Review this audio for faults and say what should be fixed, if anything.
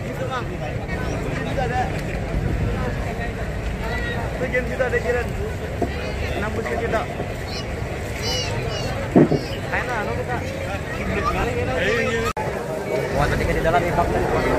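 A brief noisy smear replaces the sound from 11.41 to 11.44 s. These are lost LE Audio frames: about 30 ms went missing, which fits three 10 ms frames, and the LC3 decoder filled the gap by repeating the last spectrum with randomised signs. Prevent this by improving the Bluetooth link margin or reducing radio interference so frames arrive intact.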